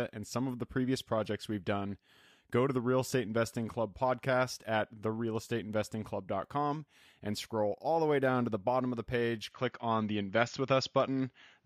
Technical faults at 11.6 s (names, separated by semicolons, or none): input switched to a poorer device